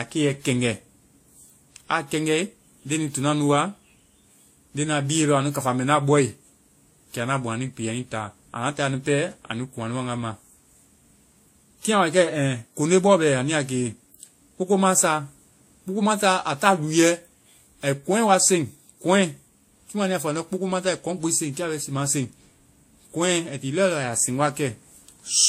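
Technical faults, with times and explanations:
Throughout, transcoding between lossy codecs: the speech has nothing above about 16.5 kHz, and two kinds of codec grain are layered on top of each other. That fits a likely WMA encode near 64 kbit/s that was re-encoded to Vorbis around 44 kbit/s, with the second codec spending bits on the first one's artefacts.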